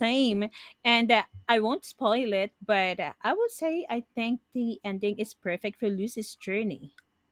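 No technical faults are audible.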